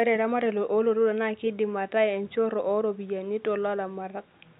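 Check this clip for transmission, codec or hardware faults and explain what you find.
No transmission or hardware faults show up in this speech clip, and the only background is room noise sitting about 43 dB below the speech.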